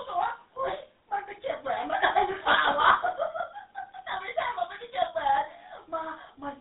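A speech clip passed through the GSM full-rate codec throughout: buzzy, gravelly roughness from pulse-excited vocal-tract coding, band limited to 200 Hz to 3.7 kHz, nothing above 3.9 kHz, consistent with 13 kbps.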